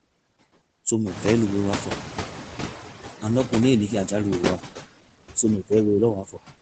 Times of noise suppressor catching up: 1.06-2.81

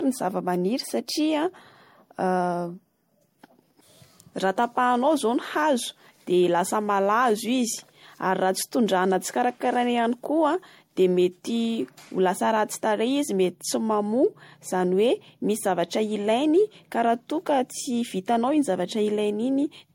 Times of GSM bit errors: none

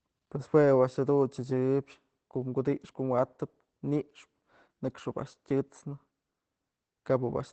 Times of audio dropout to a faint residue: none

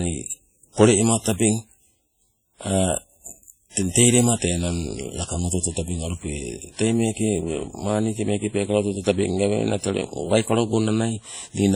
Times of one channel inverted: none

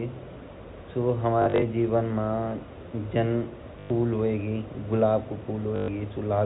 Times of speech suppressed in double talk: none

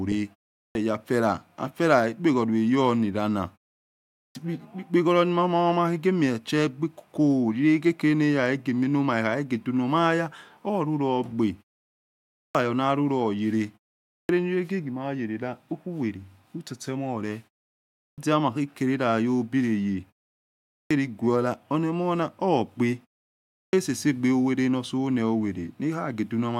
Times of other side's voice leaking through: none

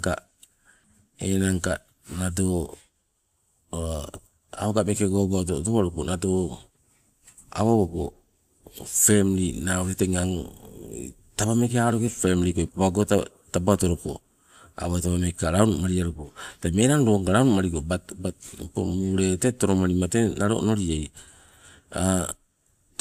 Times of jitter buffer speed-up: none

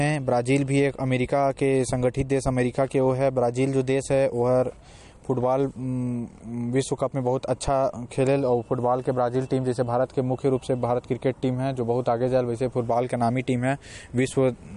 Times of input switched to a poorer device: none

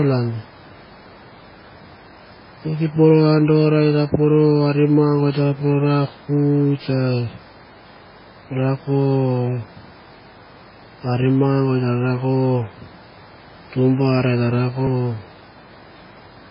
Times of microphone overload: none

